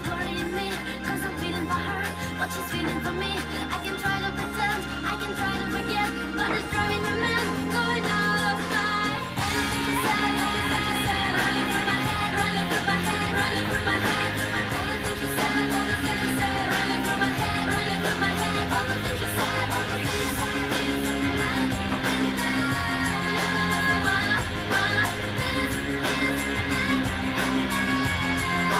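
Nothing in this recording trips up the ear; there's no glitch or disturbance anywhere in it worth pointing to.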